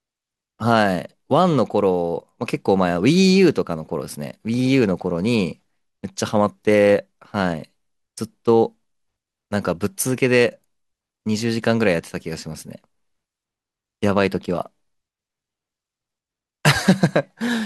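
No technical faults can be heard anywhere in the speech, so there is nothing to place on the timeline.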